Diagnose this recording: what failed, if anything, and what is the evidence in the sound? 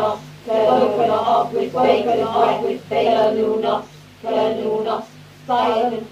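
Doubled audio track, start to 3.24 s: a similarly loud, full-band copy trails by about a second and ends abruptly, likely from a second, slower capture path.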